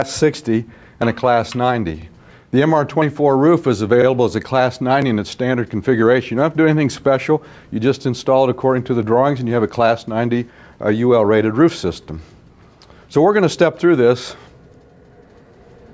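From start to finish the level rises and falls by roughly 5 dB, with gain pumping that pulls the audio down on each loud sound and lets it come back up afterwards. Loud and soft passages sit closer together in level, so the sound comes across as squashed. The likely cause is input gain set far too high for the microphone, with a fast limiter or compressor clamping it on every loud moment. The call microphone processing, which leaves nothing above 8 kHz and trims the lowest bass, is working as intended.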